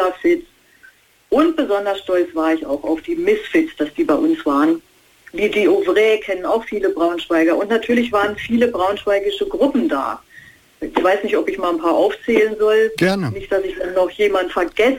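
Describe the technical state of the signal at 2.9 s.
No fault is audible at 2.9 s; the signal is intact at that point.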